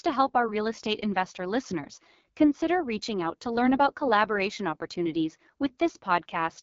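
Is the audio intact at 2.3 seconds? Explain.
No. AMR wideband (HD Voice) codec damage runs through the whole clip, including 2.3 s. The speech is rebuilt from a pulse-excited vocal tract model with noise-filled highs and nothing above 7.2 kHz, and its rough, raspy texture suggests a low rate such as 8.85 kbit/s.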